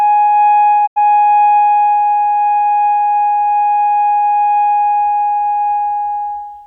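A piece of music that briefly fades out and falls silent from 0.86 to 0.98 s before resuming: a digital broadcast dropout, where about 85 ms was muted after the receiver lost frames, which fits two corrupted frames.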